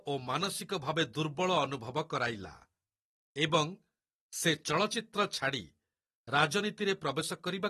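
From start to finish the speech sounds dull and smeared, with a warbling, fizzy texture clinging to sibilants and held vowels, and nothing at all above 12.5 kHz. That hard ceiling and the watery shimmer are the signature of AAC compression, likely AAC-LC coded at a low rate that fits roughly 36 kbps, where the encoder drops the top band and quantises the remaining spectrum so coarsely that gaps or substitute noise become plainly audible.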